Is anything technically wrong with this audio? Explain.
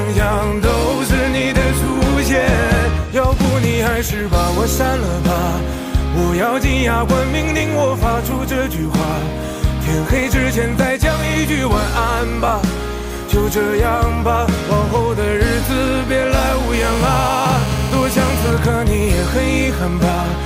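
Yes. From 16.74 to 18.50 s there is GSM phone buzz: a 2G handset close by is on a call, transmitting in bursts about 217 times a second, and the audio circuitry rectifies those radio pulses into the signal path. The result is a hard, raspy buzz at 217 Hz, rich in harmonics and unrelated to the program, sitting about 12 dB below the signal and holding steady for its whole length.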